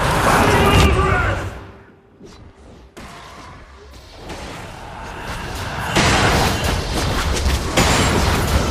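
A fast ticking, zipping texture rides on the sound from 1.39 to 1.95 s as the level drops by around 20 dB. This is zipper noise: the gain falls in unsmoothed 2 dB steps, roughly twenty per second, and each step clicks.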